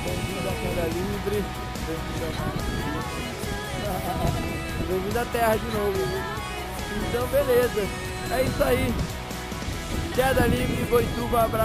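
No technical faults can be heard anywhere in the recording, with the signal holding steady and continuous throughout.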